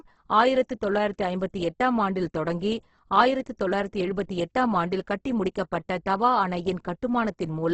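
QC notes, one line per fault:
Throughout, Opus compression: the encoder is likely running in its CELT music mode at a very low bitrate, which fits roughly 12 kbps, so most bands get too few bits and are filled with folded copies of lower bands or with noise. The speech therefore sounds rough, grainy and noisy rather than swirly, with heavy damage across the clip. The bandwidth has also been cut to wideband, leaving nothing above about 8.2 kHz.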